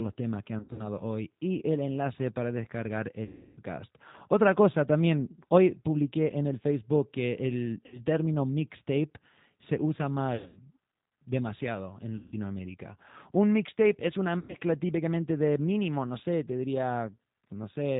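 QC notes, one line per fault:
Throughout, G.729 codec: the speech has a slightly rough, synthetic edge, and no energy above 4 kHz. That fits an 8 kbit/s G.729A link, which rebuilds each 10 ms frame from a vocal-tract filter, a pitch predictor and a few pulses rather than the waveform itself. Unlike a plain low-pass filter, the grain sits inside the voice as a rough, slightly mechanical texture, plainly audible, not just a dulling of the top end.
0.59–0.88, 3.25–3.61, 7.86–8.01, 10.36–10.61, 12.16–12.34 and 14.39–14.57 s, VoIP packet loss concealed by the speech codec: at each of these points the speech is stretched into a buzzy tone or coloured noise that fades. The decoder is repeating its last pitch and filter with falling gain. The longest is 3.25–3.61 s, with about 320 ms missing. At 0.59, 10.36 and 14.39 s the losses are scattered, so the sound stutters between concealed and real frames. 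The audio stays weak or smeared briefly after each gap.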